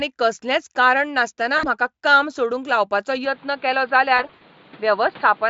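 From 1.57 to 1.67 s, between "कसलेंच कारण नासतना" and "काम सोडूंक लावपाचो", VoIP packet loss concealed by the speech codec fills a 60 ms gap. The decoder extends its last pitch and filter at falling gain, so the sound turns briefly buzzy and faded.

At 3.25 s, after "काम सोडूंक लावपाचो", the sound becomes duller and stays that way to the end. This is likely an input switched to a poorer device. Nothing above 4.7 kHz remains, and a new noise floor appears roughly 30 dB below the signal. There is no gap and no level jump.

From 4.17 to 4.42 s, more packet loss is concealed, with 140 ms missing across 240 ms in runs of up to 60 ms. It sounds like repeated buzzy smearing and dips in level.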